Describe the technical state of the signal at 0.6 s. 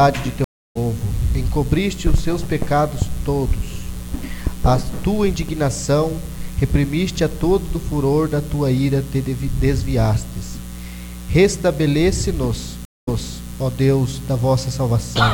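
At 0.6 s you're right inside a stream reconnect running from about 0.44 to 0.77 s. The connection dropped, the player sat silent for roughly 0.31 s, then restarted its decoder mid-stream, so the audio picks up about a fifth of a second further along, with that bit skipped.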